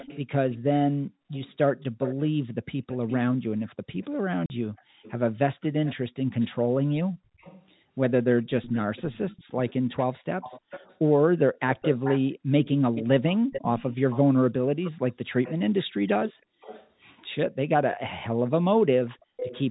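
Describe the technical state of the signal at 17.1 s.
Echo leak, 7.38 to 17.95 s: a faint copy of the speech returns 336 ms late, likely loudspeaker pickup that an echo canceller failed to remove.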